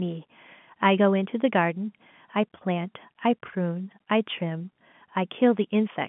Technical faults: none

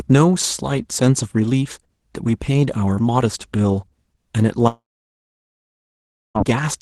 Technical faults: long network dropout

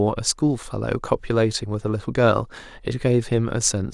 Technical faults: none

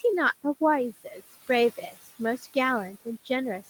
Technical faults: noise suppressor artifacts

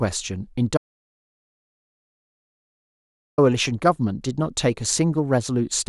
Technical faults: audio dropout to silence

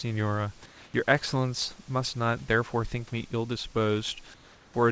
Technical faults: comfort noise in place of the background

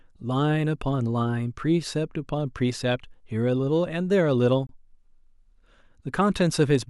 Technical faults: gap at a join of encoded pieces

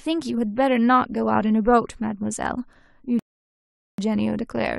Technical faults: rebuffering stall

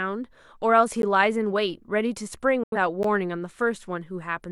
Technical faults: gap between chunks; digital broadcast dropout

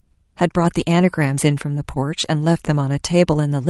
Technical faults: lost packet rebuilt from error correction

